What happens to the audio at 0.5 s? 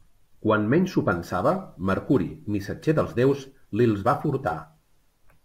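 Nothing goes wrong at 0.5 s; the speech carries on intact there, with no dropout, click, distortion or other fault at that point.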